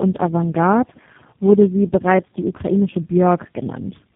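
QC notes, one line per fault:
throughout, tandem speech coding: sounds like G.723.1, GSM full rate and G.729A stacked, each re-coding prior errors; rougher, warblier than one codec, nothing above 3.7 kHz.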